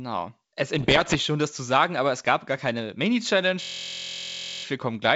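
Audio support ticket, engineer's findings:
Bit errors on an ADPCM link, 0.78 to 1.21 s: pops and rough bursts with brief level jumps. Flipped bits, at a rate of around 1.5 percent, corrupt the decoder's step size and predictor, so each hit rings on for milliseconds.

System hang loop, 3.62 to 4.64 s: steady buzz near 43 Hz. The host or driver froze while the hardware replayed one 23.22 ms ring-buffer segment 44 times, which fits a 1024-sample buffer.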